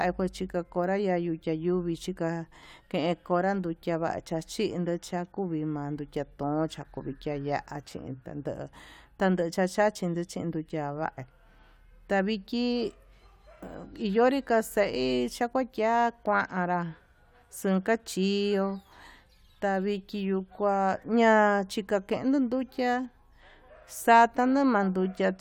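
No technical faults occur at any point in the speech, so there are none to describe in time order.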